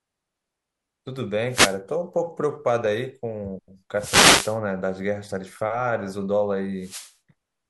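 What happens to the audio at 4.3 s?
At 4.3 s the speech sits inside a wireless microphone noise hit running from 3.96 to 4.58 s, roughly 0.6 s. The analogue FM radio link fades as reflected signals cancel the direct one, so the receiver's own noise rises, heard as a brief swish of static. Unlike a digital dropout, which leaves a silent gap or a stuttered fragment, this fills the moment with hiss that swells and recedes.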